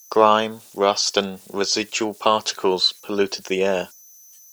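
From start to finish, the speech carries converter idle tones: a faint whistle around 7 kHz, sitting about 31 dB below the signal. The converter was running without dither, so its low-level input fell into repeating bit patterns, and those patterns produce a tone whose pitch follows the input's offset. An external whistle would stay fixed, but this tone is tied to the converter's handling of small signals.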